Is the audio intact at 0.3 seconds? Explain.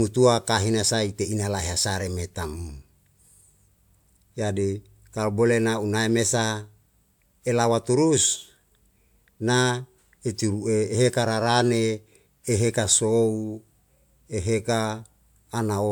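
Yes, at 0.3 seconds the audio is intact, with no dropout, click, distortion or other fault at that moment.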